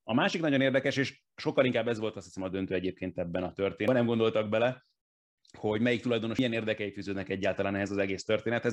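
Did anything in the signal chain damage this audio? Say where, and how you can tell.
Yes. The compressed stream carries damaged data at the codec stage: corrupted bytes make the decoder misread frames, lose sync and hunt for the next valid frame header. In the speech, each hit is a brief chirp or blip, at 3.88 s and again at 6.39 s.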